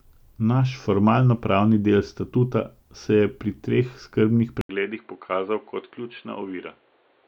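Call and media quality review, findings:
Input switched to a poorer device at 4.61 s, right after "je pri teh skrbnih", persisting to end of clip. 80 ms dropout at the switch, then speech audibly duller, nothing above 4.4 kHz. Level down by roughly 10 dB, new noise floor roughly 35 dB below speech. Likely cause: capture path moved to a narrower-band microphone or headset call profile, with different gain and self-noise.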